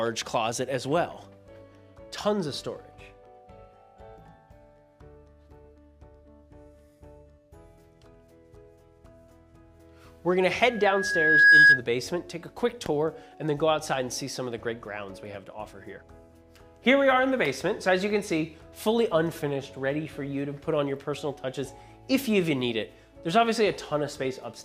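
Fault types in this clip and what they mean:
Loudspeaker feedback squeal: the microphone re-amplifies its own loudspeaker until one frequency runs away, here a 1.7 kHz tone swelling over roughly 0.7 s from 10.68 s to 11.83 s, ending about 15 dB above the sound; a spectrogram shows one bright horizontal line, the waveform a growing envelope.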